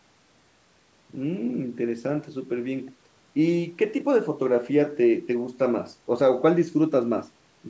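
Nothing stood out on listening; the speech shows the usual signs of call microphone processing, with the lowest bass trimmed and nothing above 8 kHz, and that is normal for the path it came through.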